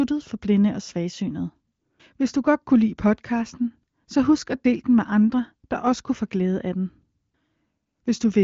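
No technical faults can be heard in this speech, which is carried by the AMR wideband (HD Voice) codec with its content stopping near 7.4 kHz and only faint coding roughness at most, consistent with one of the codec's higher bitrates.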